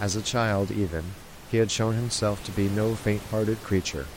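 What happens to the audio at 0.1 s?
Nothing goes wrong at 0.1 s; the audio is intact there, with only the room's own background noise, about 16 dB below the speech, sitting underneath as part of the recording.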